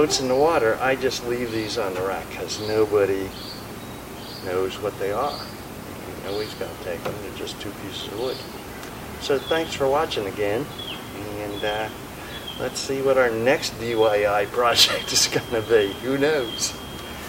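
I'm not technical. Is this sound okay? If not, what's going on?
No. A feedback whistle starts at 14.58 s and lasts to the end. It's a thin, steady 3.2 kHz tone sitting quietly behind the sound, swelling and fading slowly. Likely cause: a loudspeaker's output looping back into the microphone, hovering just short of howling.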